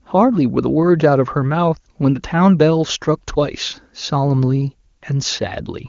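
No technical faults can be heard in this speech; it passes through an AMR wideband (HD Voice) codec at what sounds like one of its higher rates, likely 23.85 kbit/s, and the codec's effect is faint at most.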